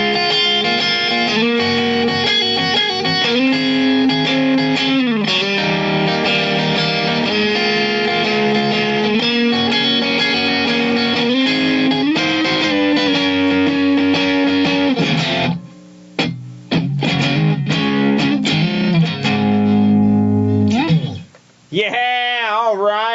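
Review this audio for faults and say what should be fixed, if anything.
Gain pumping runs throughout: the gain swings by about 15 dB, pulled down on each loud sound, likely from input gain set far too high with a fast limiter clamping it. Unlike a noise gate, pumping turns the gain down rather than cutting to silence. Lowering the microphone gain so the limiter rarely engages would prevent it.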